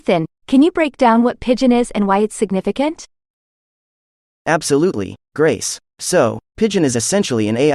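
No technical faults can be heard in this recording.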